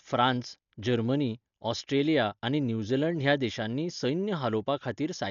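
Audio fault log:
Throughout: Dolby Digital compression, heavy, with nothing above 7 kHz; likely a starved bitrate near 48 kbps, leaving dull speech and rough dither-noise flutter.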